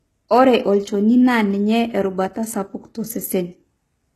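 From start to finish the speech carries plainly audible HE-AAC compression damage, likely from that codec at a bitrate that points to something near 16 kbps. The lower band is coded directly, while the treble is rebuilt by copying lower bands upward under a coarse envelope, so s sounds come out gritty and metallic rather than simply dulled, and everything stops at about 12.3 kHz. A plain low-bitrate codec would instead lose the treble or turn it swirly.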